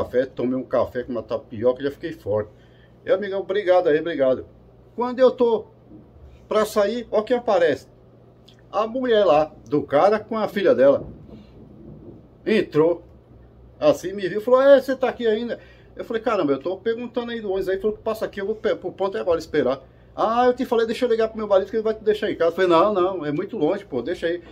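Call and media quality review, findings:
Dropped samples, 19.44 s: single sharp click. Waveform steps abruptly where a couple of samples, a fraction of a millisecond, are missing; spectrogram shows one thin vertical line. Likely a capture or transport buffer skipping data; too brief to remove audible content.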